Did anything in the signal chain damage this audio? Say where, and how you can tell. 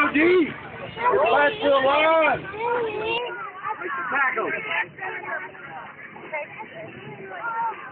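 Yes. At 3.18 s the input likely switched to a poorer device: from there to the end, nothing above 3 kHz, the level drops about 5 dB, and a new noise floor appears.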